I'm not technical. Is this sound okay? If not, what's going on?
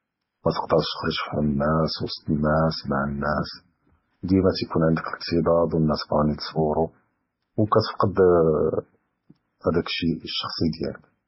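No. Transcoding between lossy codecs runs throughout: the speech is dull above 5.6 kHz, with different compression artefacts heard together, likely from being squeezed by one compressor, then another.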